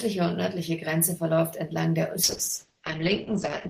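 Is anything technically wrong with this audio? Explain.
Yes, there's a call bitrate drop from 2.24 s right through to the end. The encoder gets squeezed from about 40 kbps down to 9 kbps, so the speech is coded much more coarsely and the top end is cut from 20 kHz to 8 kHz, leaving it muffled and rough.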